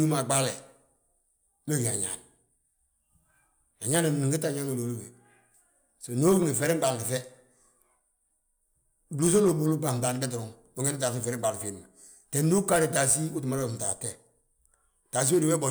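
No dropouts, clicks, distortion or other technical faults turn up anywhere in this speech recording.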